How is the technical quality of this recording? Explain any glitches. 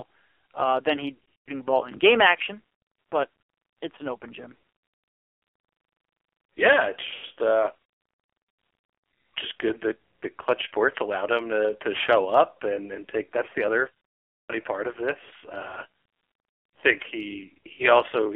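The recording has heavy mobile-codec damage throughout, plus several dropouts.

AMR narrowband mobile codec, throughout: the speech is confined to about 300 Hz to 3.4 kHz and sounds buzzy and synthetic. This fits a very low bitrate of around 5.9 kbps, where few pulses model the voice.

Lost AMR speech frames at 1.14–1.52 s (between "uh than he" and "ball in game action"), 4.90–5.10 s (after "it's an open gym"), 7.14–7.38 s, 14.42–14.55 s (between "the other" and "part of this") and 17.74–17.84 s. The decoder repeats its last good settings with falling gain, so the sound smears, warbles and fades before returning rough.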